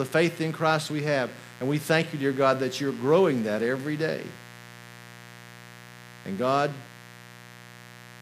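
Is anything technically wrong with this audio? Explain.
Yes. Mains buzz runs throughout: switching spikes at twice the 60 Hz mains rate inject harmonics into the kilohertz range, giving a raspy buzz roughly 20 dB below the speech.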